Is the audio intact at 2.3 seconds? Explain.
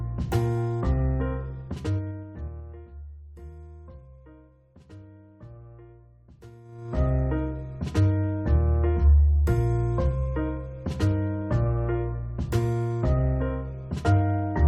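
No. Zipper noise runs from 1.56 to 2.92 s. The level drops about 20 dB in unsmoothed 2 dB steps. Each step clicks, so it ticks.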